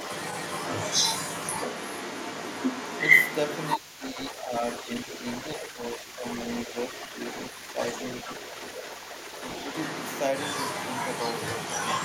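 From start to finish, the other side's voice leaking through sits at roughly the same level as the talker's speech. The likely cause is a loudspeaker feeding the microphone with residual echo that the canceller failed to remove, so a second voice comes through alongside the talker.

Speech suppressed in double talk appears at 3.77 to 4.51 s, 5.6 to 5.83 s and 5.99 to 6.24 s, as brief dips of about 5 dB. The likely cause is the echo canceller mistaking overlapping speech for echo and turning everything down, which leaves the talker momentarily quieter.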